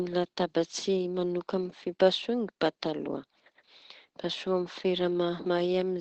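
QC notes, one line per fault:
Throughout: Opus voice compression. Nothing above about 8.5 kHz, and what remains is plainly damaged, with a muffled, hoarse and slightly robotic edge. This comes from the linear-prediction coder being limited to a wideband range and given too few bits, so the excitation is quantised coarsely. Unlike a plain low-pass filter, the grainy, buzzy texture is in the speech itself, and the degree of damage fits a rate around 12 kbps.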